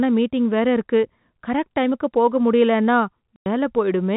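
At 3.36 s the speech drops abruptly into a hard silence lasting 100 ms, until 3.46 s. This is packet loss filled with silence: a run of packets never arrived, a gap that fits five 20 ms packets, and the receiver played zeros instead. The telephone-band G.711 coding, with nothing above 4 kHz, carries the sound on either side.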